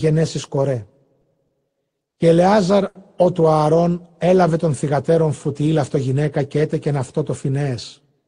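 Speech running through a call path carries periodic clock jitter for its whole length. Interference at around 100 Hz is modulating the converter's sampling clock, so each component of the speech picks up sidebands spaced about 100 Hz above and below it. The effect is strongest on the higher frequencies and comes across as a rough, metallic edge on voiced sound that drops away whenever the signal falls silent. At 2.88 to 2.98 s there is a short stall from a late packet. The jitter buffer ran dry when a packet failed to arrive on schedule, and the receiver held the last sound, stretching it by 70 ms until the packet turned up and playback resumed from the same point. Nothing is lost, but that moment lingers, and the playout delay grows by 70 ms. From 5.48 to 5.96 s a jitter buffer speed-up follows. With more audio queued than the buffer's target, the receiver trimmed short pitch-period-sized pieces in quick succession, about 40 ms in total. 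That stretch plays at 107 percent speed with pitch unchanged, so the delivery sounds slightly hurried before settling back.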